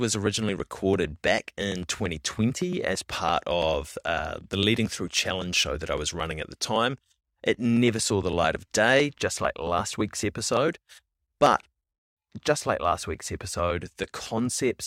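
Nothing stood out as a technical fault on listening to this speech recording.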